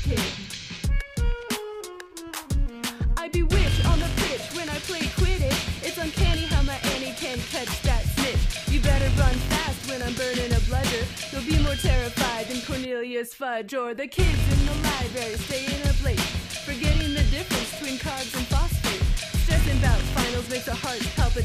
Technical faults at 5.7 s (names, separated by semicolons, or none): none